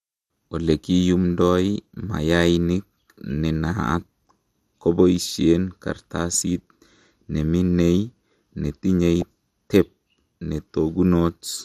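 MP2 compression runs through the whole speech clip: the sound is dull, with a gurgling, granular texture. This is likely the result of MPEG Layer II coding at a low rate, around 80 kbps, where upper sub-bands get switched off and the remaining bands are coarsely quantised.

DAB burbling appears at 9.20 s as a brief burst of burbling. Bit errors slipped past error correction into the MP2 data, corrupting samples so that short blips of noise appeared in single sub-bands. The error rate behind it is tiny, about one bit in a thousand.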